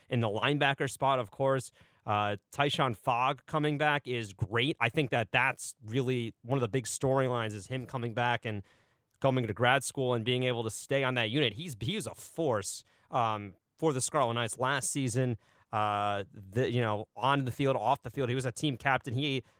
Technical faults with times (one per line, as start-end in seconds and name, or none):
none